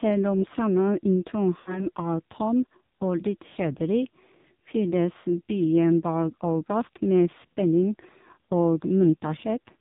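Throughout, the AMR narrowband mobile codec runs at a very low rate, likely near 5.9 kbps, stripping everything above 4 kHz and leaving the speech heavily buzzy and synthetic.

From 1.60 to 1.87 s, lost AMR speech frames, consistent with about 60 ms of corrupted data, make the decoder repeat its last settings, so the sound smears, fades, then returns rough.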